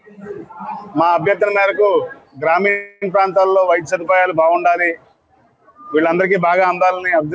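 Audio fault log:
2.70–3.04 s, call audio freeze: a fading buzz fills 0.32 s, likely from an emptied jitter buffer. Audio then resumes where it stopped with nothing skipped, unlike a dropout.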